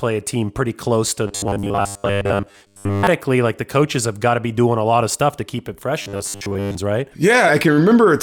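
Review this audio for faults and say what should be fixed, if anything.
Audio likely arrived too seldom, so playback kept repeating a slice of about 10 ms in place of most of the missing signal. This produced robotic sound from repeated short buffers from 1.27 to 3.07 s and from 6.02 to 6.75 s, turning the speech into a rigid, metallic buzz locked at 100 Hz. Feeding the playback path steadily, with enough buffering or jitter margin, would stop this repeat fallback from triggering.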